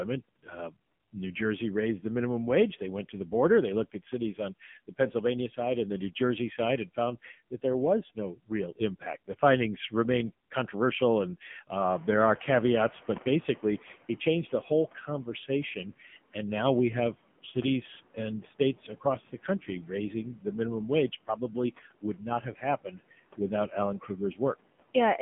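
From the first second to the last, a noise suppressor is at work. It judges which frequency bands hold steady noise and pulls them down, frame by frame, by about 18 dB. So the background sinks in the gaps between phrases and comes back up under the speech. Around 12 s the room noise rises by about 14 dB, a genuine part of the recording that then sits about 19 dB below the speech.

The whole clip also passes through the AMR narrowband mobile codec, AMR-NB. It carries only the telephone band, about 150 Hz to 3.4 kHz, and nothing above 3.6 kHz gets through. The voice is rebuilt from a vocal tract model and a small set of pulses, not sent as a waveform. The codec damage is heavy. The speech sounds buzzy and synthetic, which fits a low rate near 6.7 kbps.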